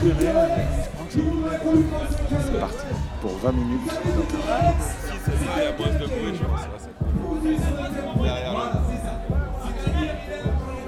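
No technical faults can be heard in this audio.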